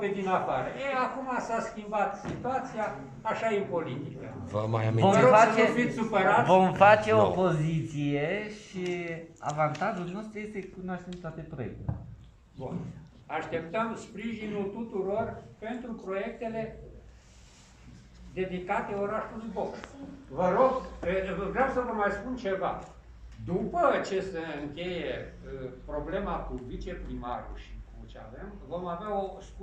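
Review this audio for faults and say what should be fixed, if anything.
No faults can be heard anywhere in the audio. Nothing needs to be fixed.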